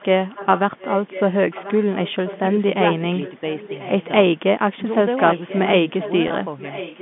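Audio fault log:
0.00–2.53 s, 3.01–4.10 s, 5.17–7.02 s: echo leak. A copy of the speech trails about 1.04 s behind, roughly 15, 20, then 10 dB down, likely loudspeaker pickup the far-end canceller missed.
6.28 s: packet loss with pitch repetition. A 20 ms gap, which fits one lost packet, is bridged by repeating the last pitch period, giving a brief held, buzzy tone.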